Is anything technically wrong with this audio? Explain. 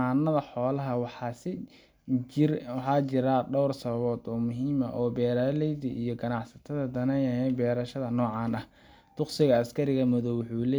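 No, nothing technically wrong stands out in this speech recording; it all sounds fine to the ear.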